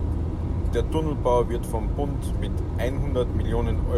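Listening through the speech recording, nothing stood out.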